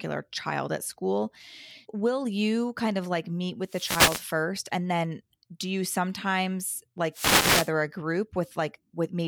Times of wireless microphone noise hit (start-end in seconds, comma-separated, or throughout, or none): 3.64-4.36, 7.12-7.71